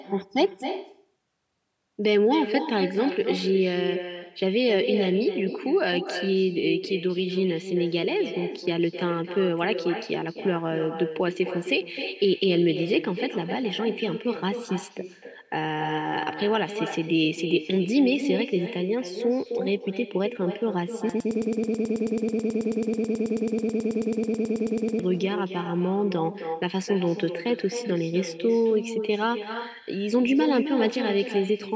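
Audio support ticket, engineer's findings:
Echo with no canceller, whole clip: every phrase returns as a thinner copy about 9 dB down, roughly 300 ms late. It is a discrete repeat, not diffuse reverb. Far-end loudspeaker pickup with no echo cancellation.

Broken-record loop, 21.1–25.0 s: a 108 ms fragment repeats exactly, 36 times back to back. These are identical repeats, not dropout gaps or jitter. The original audio for that span is lost. Likely a stalled player, encoder or stream resending its last buffer.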